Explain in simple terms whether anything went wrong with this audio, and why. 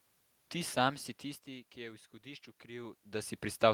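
From 1.47 s to the end, there is automatic gain rising. The input dropped, so the system slowly turned itself up, swelling the speech and room noise together.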